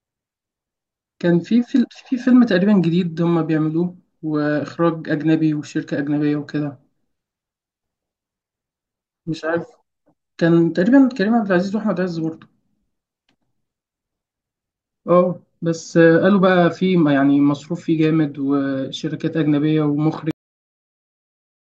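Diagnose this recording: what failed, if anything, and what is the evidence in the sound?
Cut-off end at the storage or buffer stage: the speech stops abruptly at 20.31 s, mid-sound, into flat digital silence with no decay, like a vertical wall on the waveform.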